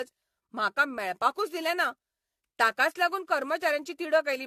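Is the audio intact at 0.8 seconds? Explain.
No. At 0.8 seconds the speech carries generation loss, as it does across the whole clip. It sounds swirly, smeared and hollow, with blurred attacks. The likely cause is repeated lossy re-encoding, around seven passes, which fits AAC at 64 kbit/s. Each pass adds fresh noise and spectral holes.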